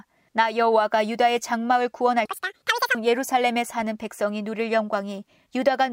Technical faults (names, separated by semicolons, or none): audio read two samples at a time (double speed)